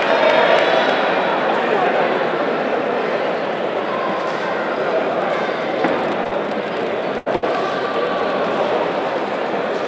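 Two short concealed packet losses sit back to back at 6.24–6.27 s and 6.27–6.33 s, where about 20 ms and then 40 ms of audio never arrived and the receiver papered over the holes by extending the preceding sound. They come across as a brief smear or wobble. On a spectrogram the harmonics or noise band run unnaturally flat through that stretch, and in the waveform the cycles repeat too regularly before the real signal returns. Shortly afterwards come two bursts of packet loss, at 7.18–7.28 s and 7.36–7.44 s, removing about 80 ms and 60 ms respectively. Here the concealment holds the last sound as a buzz or hiss that sinks in level, and the audio then resumes further along with material skipped. In the waveform each burst appears as a decaying, repetitive envelope with a join where the real signal picks up again, while the spectrogram shows frozen, fading bands. Above 8 kHz the spectrogram is empty throughout, which fits a call path using G.722 at 64 kbps.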